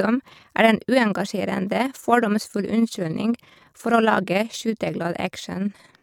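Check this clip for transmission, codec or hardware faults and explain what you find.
The speech carries one processing fault, overlap-add ripple, present from start to finish. The audio was split into windowed frames and rebuilt with an overlap whose windows don't sum to a steady gain, so the level swells and dips once per frame, by about 6 dB, around 20 times a second. It sounds like a fast, rough flutter, a rough tremolo over the voice. The waveform envelope shows regular scalloping at that rate, and a spectrogram shows evenly spaced vertical banding across all frequencies.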